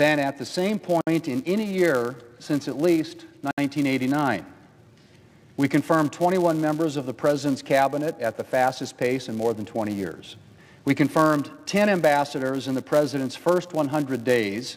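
Filter restarted on every block, from the start to the end: a filter loses its memory at each block boundary and begins again from silence, so each block opens with a small click. These merge into a 200 Hz buzz, pointing to blocks of about 5 ms, that rises and falls with the level of the sound.

Gap at a join of encoded pieces, at 1.01 s and 3.51 s: separately encoded pieces were joined without trimming the encoder's start-up delay and end padding. Silences of 60 ms and about 68 ms cut in with smeared edges, then the sound resumes where it stopped.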